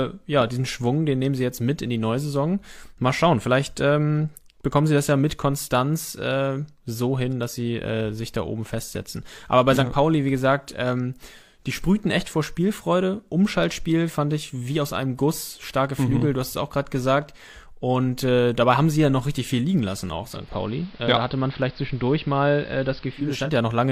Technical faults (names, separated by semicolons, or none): digital radio blending to analogue